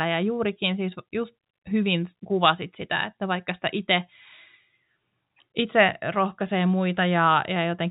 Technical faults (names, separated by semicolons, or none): none